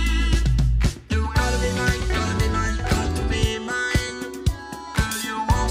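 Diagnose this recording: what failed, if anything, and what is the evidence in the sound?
Nothing stood out on listening that would point to a failure at any stage of the chain.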